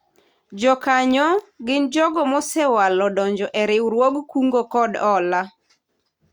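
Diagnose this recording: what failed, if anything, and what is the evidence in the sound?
Nothing failed in this recording, and the sound gives no evidence of any fault at any stage.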